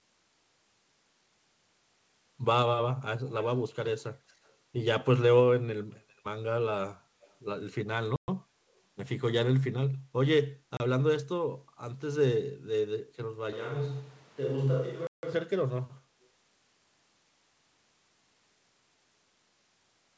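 Between 3.32 and 3.57 s a copy of the speech trails the original by 285 ms, only about 15 dB down, and weaker repeats of the same delay return at 4.28 to 4.5 s (about 40 dB down), 7.21 to 7.34 s (about 35 dB down) and briefly at 16.23 s. This is echo leak: a loudspeaker on the far end likely fed its own microphone, and the echo canceller let scraps of that pickup back into the call.

At 8.16 s the sound drops dead for 120 ms, and at 10.77 s a 30 ms hole follows, the signal jumping to and from zero without any fade. These are blocks of digital silence, runs of samples replaced by zeros, most plausibly because the output buffer was not filled in time.

From 13.53 to 15.33 s the speech abruptly turns hollow and roomy, loses bass, falls roughly 5 dB, and sits over room noise around 30 dB below it, then snaps back just as suddenly. That is a switch to a distant microphone, most likely a further-off pickup standing in when the close one dropped out. 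Inside that stretch, at 15.07 s, comes the longest block of digital silence, 160 ms. Throughout, the call's G.722 path caps the audio at 8 kHz.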